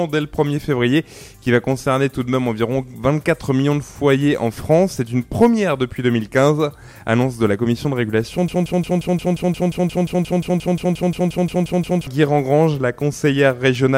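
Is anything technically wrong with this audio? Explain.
Yes. From 8.48 s to 12.07 s the audio sticks: a fragment about 176 ms long repeats exactly, back to back, 20 times, giving a rapid, mechanical stutter that stands in for the sound that should have continued. This is a broken-record loop. The likely cause is a player, encoder or stream that stalled and kept outputting the last short piece it held. Whatever belonged in those three and a half seconds is missing.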